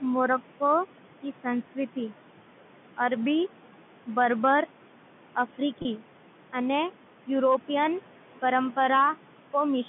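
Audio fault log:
throughout: noise suppressor artifacts, the steady background is pulled down by about 12 dB between phrases and rises back under speech.
5.82 to 5.85 s: packet loss with pitch repetition, a 30 ms gap bridged by repeating the last pitch period, heard as a brief held buzzy tone, which fits three lost packets.
7.44 to 7.86 s: hard clipping, peaks driven about 2 dB past the limit are cut flat, adding high harmonics heard as crackle on the loudest moments.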